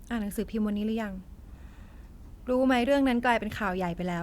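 Nothing technically wrong can be heard anywhere in this speech recording.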